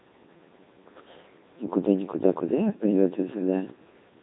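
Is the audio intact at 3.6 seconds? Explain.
No. Throughout the clip, including 3.6 s, a Codec 2 vocoder, which fits about 2.4 kbit/s, resynthesises the speech from sine waves, leaving it heavily robotic, buzzy, and empty above 3.8 kHz.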